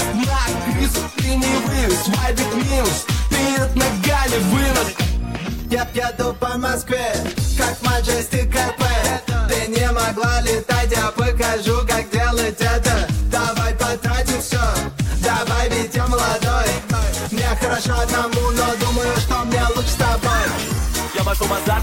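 Nothing stood out as a technical problem on listening to this audio.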